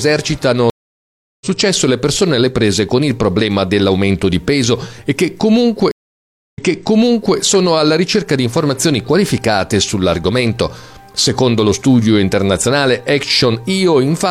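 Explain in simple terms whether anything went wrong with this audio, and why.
Two stream reconnects can be heard. At 0.70 s the audio cuts out for about 0.7 s while the player loses its connection, rejoins and starts decoding afresh; when sound returns around 1.46 s it has jumped ahead by roughly half a second, so a short stretch is simply missing. At 5.91 s it happens again, with about 0.6 s of silence, but this time the server resends buffered material and playback resumes 0.84 s earlier, repeating a piece already heard before settling by 7.37 s.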